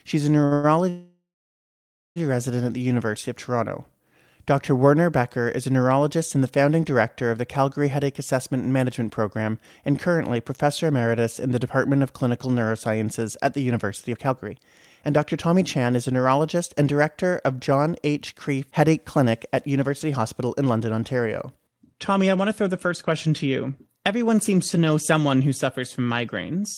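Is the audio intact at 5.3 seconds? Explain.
Yes, the speech at 5.3 seconds plays through intact, with no audible fault at that moment.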